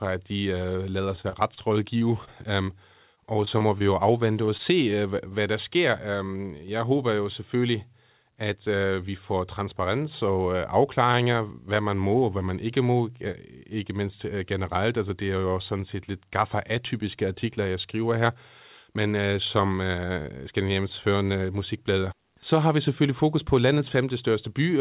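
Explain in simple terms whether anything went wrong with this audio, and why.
Yes, several things went wrong on the way through the call connection.

From 1.16 to 4.96 s there is repeated packet loss (robotic sound). Small chunks of the speech kept failing to arrive, each gap up to 30 ms. The receiver patched each hole by continuing the last sound, so this stretch sounds choppy and robotic, with about 0.2 s of speech missing in total.

From 6.65 to 6.99 s there is a jitter buffer speed-up. Audio had piled up waiting to be played, so the receiver trimmed out tiny slices, a few hundredths of a second altogether, to catch up. The speech runs about 9% faster here without changing pitch, so it sounds slightly rushed.

From 11.12 to 11.16 s there is a short stall from a late packet. One chunk arrived late, so the receiver stretched the previous sound by 16 ms while it waited. Nothing is lost, but one sound is held a touch too long, with a slight buzz or dip.

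From 13.32 to 13.35 s there is a short concealed packet loss. About 20 ms of speech never arrived in time, and the receiver covered the hole with an 18 ms continuation of the sound before it, heard as a brief smear or wobble.

The call codec cuts everything above 4 kHz, which gives the usual muffled telephone sound.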